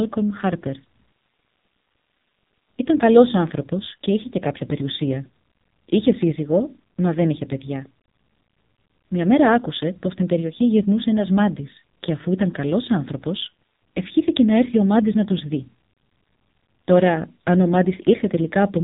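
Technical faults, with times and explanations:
Throughout, AMR narrowband mobile codec: nothing above 3.8 kHz survives, and the speech sounds heavily buzzy and synthetic because each 20 ms frame is rebuilt from a vocal-tract model driven by only a few pulses, which fits a rate near 5.9 kbps.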